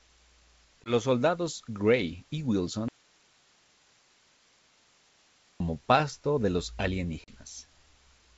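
It's a speech clip carried over G.722 wideband at what sounds like 64 kbit/s, with two kinds of fault. There's packet loss on an ADPCM call at 0.84 to 0.94 s, a 20 ms silent hole (about one packet), and again at 7.24 to 7.37 s, right after "pasto de los", losing 40 ms (roughly two packets). Each time the decoder's predictor drifts from the sender's, so speech comes back slightly distorted before it settles. Between 2.88 and 5.60 s there's an audio dropout to a faint residue: the sound cuts abruptly to hiss about 35 dB down for 2.7 s before "pasto de los", likely a lost input with the rest of the chain still live.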